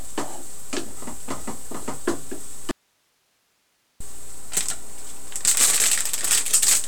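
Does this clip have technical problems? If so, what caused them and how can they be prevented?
Yes. A DC offset runs throughout: the waveform sits shifted off zero by a constant, inaudible but wasting headroom and adding steady energy at the spectrum's very bottom. A high-pass filter or DC-blocking capacitor at the input prevents it.

An audio dropout to a faint residue occurs from 2.71 to 4.00 s. The signal vanishes abruptly for about 1.3 s, leaving only hiss roughly 45 dB down, likely a momentary break in the source while the downstream path stayed live. Secure connections and reliable, monitored signal links prevent it.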